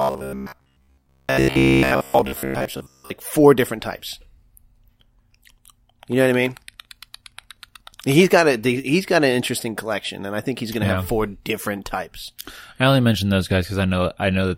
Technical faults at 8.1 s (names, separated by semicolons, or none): none